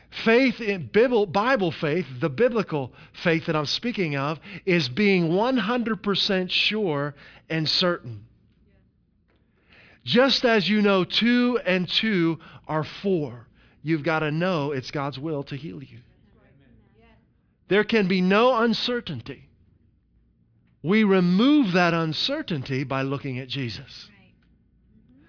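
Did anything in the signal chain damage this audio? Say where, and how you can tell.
No, nothing damaged this audio.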